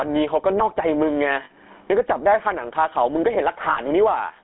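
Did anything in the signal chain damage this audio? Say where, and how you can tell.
Yes. The first problem comes from the gain stage. All through the clip, the gain swings by about 20 dB around loud sounds, which squashes the levels together. The likely cause is microphone gain set far too high, with a fast limiter pulling it down. Steady compression would leave the noise floor still rather than swinging the gain like this.

The GSM full-rate codec damaged the audio throughout. The band is confined to roughly 250 Hz to 3.5 kHz, and the sound has a buzzy, gravelly roughness that fits a 13 kbps full-rate encoder, which drives a vocal-tract model with sparse, regularly spaced pulses. A simple low-pass filter would dull the sound without adding that grain.

Lost GSM frames appear at the network stage, at 1.44 to 1.51 s and 3.70 to 3.79 s. Each time, the sound freezes into a metallic ring for about 60 ms, which fits three lost frames. 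The decoder repeated the last good frame's settings. A plain dropout would leave silence or a click, with no ringing tail.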